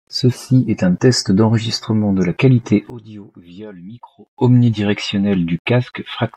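From 2.9 to 4.38 s the sound collapses by about 20 dB to a faint copy. The likely cause is one channel inverted, cancelling the shared content in mono.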